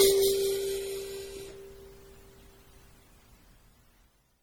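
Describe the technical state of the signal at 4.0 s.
At 4.0 s the music carries generation loss, present throughout the clip, likely from about seven successive MP3 passes at 64 kbit/s, each requantising on a shifted frame grid. It sounds swirly, hollow and smeared, with blurred attacks; a spectrogram shows accumulated spectral holes and soft onsets.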